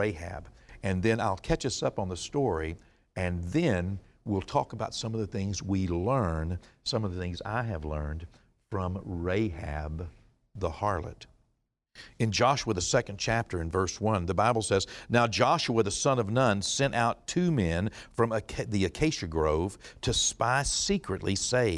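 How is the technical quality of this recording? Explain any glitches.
Nothing stood out as a technical problem on listening to the recording, so there are no glitches to explain.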